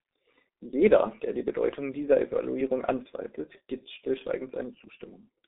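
From start to finish the speech carries G.723.1 codec damage, and it is heavy. Everything sits in a narrow telephone band of roughly 250 Hz to 3.7 kHz, so voices sound muffled and boxy, while the coarse, slowly updated voice model leaves them hoarse and smears consonants. That points to a very low rate near 6.3 kbit/s. A spectrogram shows a hard ceiling at 3.7 kHz, nothing below 250 Hz, and blurry, blocky harmonics.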